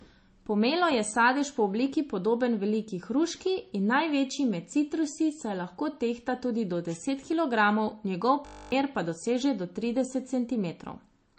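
MP3 compression is the likely cause of the damage heard from start to finish. The speech has a hard ceiling near 8.4 kHz, with nothing above it, because the encoder cuts the treble at a fixed frequency. It also dropped weak frequency components that flicker between frames, giving a watery, swirly coating and smeared consonants. The damage is plainly audible and fits a low bitrate of around 34 kbps.

A system hang loop runs from 8.46 to 8.72 s, just after "do deset kilogramov njegov" and before "pa doseže do". The computer or driver froze while the sound hardware kept replaying the same 20 ms slice of its buffer. That slice repeats about thirteen times, which at 50 repetitions per second turns into a steady, rough buzz at 50 Hz instead of speech. About a third of a second of the original audio is lost.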